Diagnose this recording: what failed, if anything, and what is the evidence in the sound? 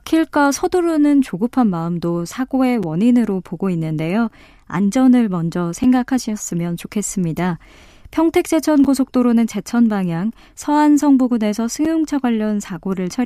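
A gap between chunks appears at the chunk joins, likely from codec padding or a player starting each chunk late: short, hard-edged silences of about 6.5 ms at 2.83, 5.84, 8.84 and 11.85 s, spaced every 3.0 s. Each chunk's audio is intact, but the chunks are joined with silence between them.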